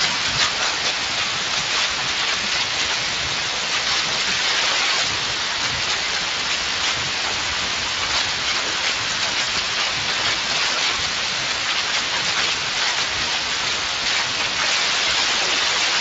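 Throughout the recording, the speech carries the coarse, hoarse and noisy texture of the Speex codec, and the damage is plainly audible. Speex is a CELP coder that models the voice as a filter driven by an excitation signal. The rough edge here points to a mid-range setting of around 20 kbps, where the excitation is coded too coarsely to reproduce the voice cleanly. The result is a grainy, noisy quality.

From 9.41 s to 9.50 s there is VoIP packet loss concealed by the speech codec. About 60 ms of audio is missing, which fits three lost 20 ms frames. Instead of silence, the decoder keeps extrapolating from the last pitch and spectral envelope it received while pulling the gain down frame by frame. The gap is filled by a smeared, stretched continuation that fades. The speech sounds weak or distorted for tens of milliseconds or more after it resumes, because the decoder's state has to recover.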